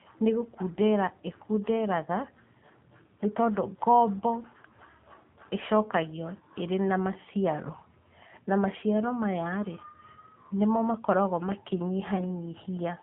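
A speech recording passed through the AMR narrowband mobile codec: nothing sits above 4 kHz, so a spectrogram shows a hard ceiling there. The voice has a buzzy, synthetic edge whose plainly audible coarseness fits a low mode of about 7.4 kbps. Lost AMR speech frames disturb the sound from 12.16 to 12.35 s, which fits a single dropped 20 ms frame. The decoder fills it by repeating the last pitch and vocal-tract settings at falling gain, giving a brief dip or warble. The waveform shows a short amplitude sag, and the voice returns rough for a moment.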